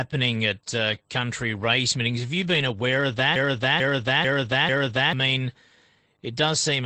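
Just after "at uh country", a short lost packet rebuilt from error correction lands at 1.89 s, followed by a longer rebuilt stretch from 2.11 to 2.27 s and further single 20 ms patches at 2.46, 2.54 and 2.60 s, the last just before "aware of". No gaps are audible because each missing packet was replaced with the lower-quality redundant copy carried in the following packet. Those patches sound grainier and noisier than the surrounding speech, a roughness set against the Opus call path's coding noise and its cut-off around 8 kHz.

Right after "aware of", from 3.36 to 5.13 s, a broken-record loop takes over. A fragment of about 0.44 s plays four times back to back with no variation, giving a stuttering, mechanical repetition. The likely cause is a stall somewhere in the playback or streaming chain, which kept re-sending its last held fragment until it recovered. Whatever speech belonged in those 1.8 seconds is gone rather than delayed.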